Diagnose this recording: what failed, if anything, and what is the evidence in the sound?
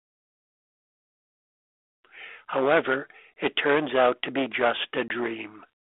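Hard clipping affects two stretches of the speech, from 2.56 to 2.97 s and from 3.43 to 5.33 s. Peaks there are driven about 11 dB past full scale. The tops are cut flat, so loud syllables get a harsh, buzzy fuzz with added high harmonics. The stage is a gain or conversion step that ran out of headroom.

Packet loss on an ADPCM call causes a hard-edged gap at 5.08 s. About 20 ms drops out, roughly one packet, inside the second clipped stretch. This is the network stage. The receiving decoder's predictor and step size lose track of the sender's during the hole. The sound resumes slightly distorted, then settles. The narrow 300 to 3500 Hz band and light grain fit G.726 at 32 kbit/s.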